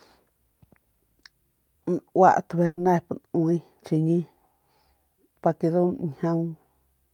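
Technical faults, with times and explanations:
2.65 to 2.79 s, burst of packet loss: the speech stops moving forward and turns into a held, fading buzz or hiss for about 120 ms, then picks up again further along with a small jump. A run of packets never arrived in time, so the receiver stretched the last sound it had and faded it out across the gap, with no silence between. When audio returned, the 120 ms that belonged there was gone.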